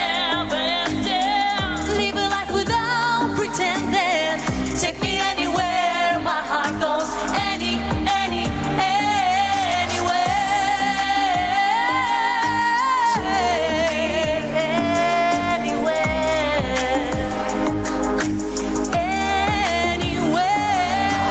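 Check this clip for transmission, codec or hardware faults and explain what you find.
One fault runs through the whole clip: gain pumping. The likely cause is input gain set far too high for the microphone, with a fast limiter or compressor clamping down each time a loud sound arrives. The level swings by around 10 dB. Loud and quiet passages end up squeezed toward the same level, so the sound is flattened. Nothing reaches above 8 kHz, which fits the call codec's bandwidth.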